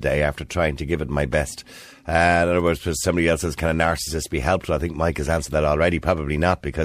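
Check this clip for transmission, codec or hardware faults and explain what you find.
No faults detected here.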